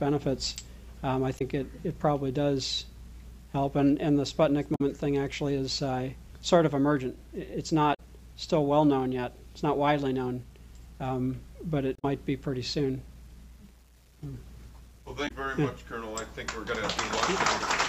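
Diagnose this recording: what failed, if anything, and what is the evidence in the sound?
Throughout the clip, a grainy distortion tracks the sound at roughly 40 dB below the signal. It gets grittier as the level drops, and the lowest-level detail sputters or falls away. The stage is likely sample-format conversion: a reduction to around 9 bits with plain rounding and no dither. Because the rounding error follows the waveform instead of forming an independent noise floor, it is heard as distortion on quiet passages rather than as steady hiss.

The second fault is damaged data in a compressed stream, at the codec or storage/network stage. There are five brief disruptions, each 70 to 93 ms long: 1.35–1.42 s, 4.72–4.81 s, 7.90–8.00 s, 11.95–12.05 s and 15.24–15.31 s. They recur every three to four seconds. At each one, corrupted bytes in the encoded stream make the decoder misread or reject the affected frames. 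It loses sync and hunts for the next valid frame header, so the sound breaks for a moment before decoding resumes.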